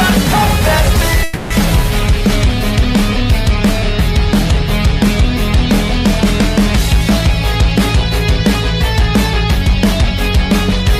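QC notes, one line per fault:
1.23–1.53 s, call audio freeze. The sound stalls, and its last fragment is drawn out as a fading buzz or hiss for 270 ms. It then resumes exactly where it stopped, with nothing lost, but 270 ms late. Held-up packets likely emptied the jitter buffer.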